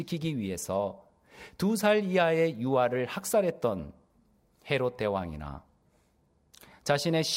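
From 5.24 s to the end, channel delay (comb filtering) sets in: one channel lags by about a sample, so the mono sum cancels near 20 kHz, dulling the top like a gentle low-pass rather than a hollow phasing sound.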